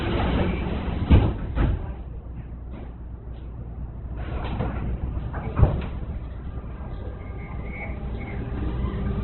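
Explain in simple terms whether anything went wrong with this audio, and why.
Opus compression damage runs through the whole clip, from start to finish. The sound is grainy and rough, with a noisy hiss where clean tones should be, and everything above about 4.1 kHz is missing, so it sounds dull and boxed-in. This is likely the result of squeezing the audio very hard with the Opus codec: when too little data is available, it rebuilds the missing detail with noise and narrows the range of pitches it keeps.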